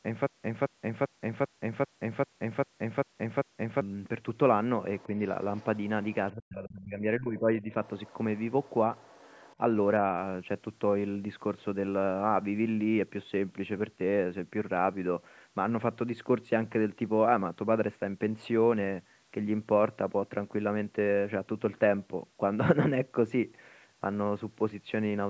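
From the very start until 3.81 s, the same short burst of speech repeats nine times at an even pace, each a 270 ms fragment followed by about 124 ms of dead digital silence, giving a cycle of roughly 394 ms. This stutter with silent gaps is already under way when the audio begins. It is likely a stalled player or stream that replayed its last fragment at each retry and then ran dry, so the speech due in those gaps is lost.

Next come faint scraps of a second voice sitting far beneath the main talker, at 4.99 s, 5.56 to 5.84 s, 6.03 to 6.15 s, 7.85 to 8.13 s, 8.37 s, 8.63 to 8.71 s and 8.96 to 9.56 s. They are mostly about 30 dB down, and the 8.37 and 8.63 s fragments are about 35 dB down. This is the other side's voice leaking through, likely because the far end was played through a loudspeaker and the echo canceller left some of it in the microphone signal.

Between 6.32 and 7.75 s, the main talker dips, sinking as much as about 30 dB, with around a second of speech affected in total. 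That points to speech suppressed in double talk: with both sides talking at once, the canceller likely could not separate the talker from the loudspeaker echo and turned everything down.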